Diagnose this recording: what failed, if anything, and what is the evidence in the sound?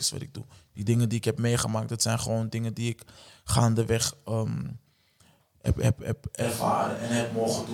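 At 6.44 s, right after "heb heb heb", the speech abruptly turns roomy and hollow with thinner bass and holds that way to the end. Level barely changes, and room noise sits roughly 25 dB below the speech. This is likely a switch to a distant microphone at the capture stage.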